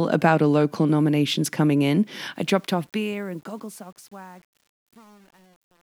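A speech clip with a fade-out that shows truncation distortion on a fade. Just after "local nominations coming in", at 2.36 s, the level starts falling toward the end at 5.89 s. The fade stage keeps too few bits and adds no dither, which fits about 9-bit resolution. As the level drops, the waveform collapses into coarse steps. The sound turns gritty. From 3.09 s to the end the grit is at its worst.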